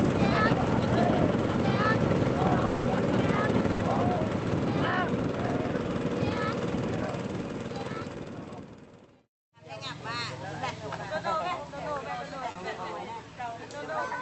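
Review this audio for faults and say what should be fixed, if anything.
From 2.65 to 2.87 s, the last sound stretches into a fading buzz or hiss for about 200 ms. This is likely a long network dropout, and the real audio is lost. Prevent it with a steadier network link or redundant transmission.

A burst of packet loss hits at 3.71 to 3.81 s. About 80 ms is replaced by a held, fading continuation, and playback resumes past the gap. Forward error correction and a deeper jitter buffer would help.

Short concealed packet loss occurs at 12.51 to 12.57 s. A 40 ms hole is filled from the preceding sound, giving a brief smear. In-band FEC or packet duplication would prevent it.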